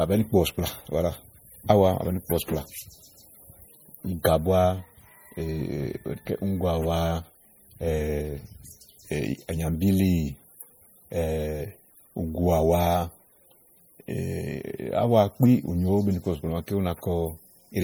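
Throughout the speech a watery, swirling quality is plainly audible, with sibilants turning metallic and chirpy and consonant attacks smearing. This is likely MP3 compression at a low bitrate, around 48 kbps, where weak frequency lines flicker between frames as bits run short.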